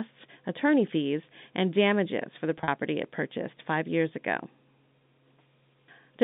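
From 2.58 to 2.68 s, packet loss with pitch repetition: about 70 ms of speech goes missing in gaps up to 40 ms, each patched by repeating the last pitch period, giving a brief buzzy hold over the telephone-band G.711 line.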